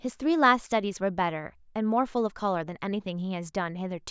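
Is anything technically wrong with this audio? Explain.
No, nothing technically wrong can be heard anywhere in this speech recording.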